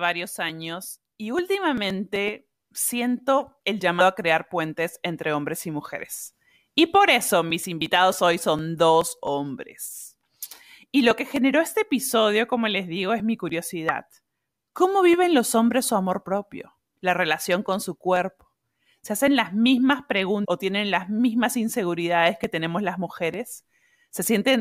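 Speech with damaged data in a compressed stream: short glitches at 4.00 s after "y últimamente siento el", 7.80 s, 13.89 s after "les digo es mi", and 20.44 to 20.46 s before "o tienen las mismas". Corrupted bytes make the decoder lose frame sync.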